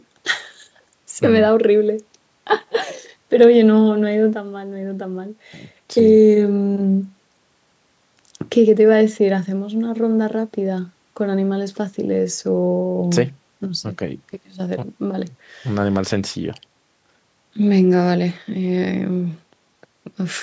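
At 4.33 s the level drops abruptly by about 7 dB, with speech and background noise falling together, and it stays down until 5.76 s. This sudden gain jump is most likely a digital gain change applied between adjacent samples without any ramp.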